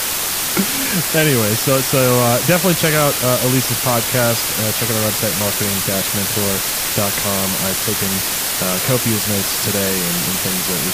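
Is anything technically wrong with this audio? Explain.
Yes. Throughout the clip, the speech has been reduced to a low bit depth with dither: only 3 bits describe each sample, and random dither noise was added before rounding to those few levels. Dither turns what would be harsh, signal-dependent distortion into steady white noise. At 3 bits that noise is very high, roughly as loud as the speech itself, so a constant, even hiss sits over everything, with no crunch or grit in the speech.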